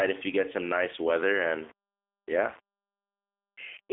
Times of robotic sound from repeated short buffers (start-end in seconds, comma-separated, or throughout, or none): none